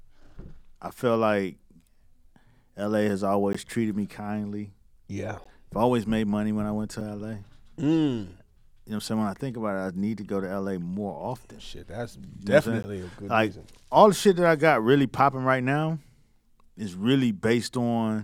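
At 3.53 s, before "treated me kindly", at 5.44 s, before "I've always made money", at 7.01 s, after "when I went to", and at 12.83 s, the speech drops into a block of digital silence, 15 ms long except the 5 ms one. The output buffer likely went unfilled in time, so samples became zeros. Unlike a faded dropout, each cuts out with hard edges, heard as a tick.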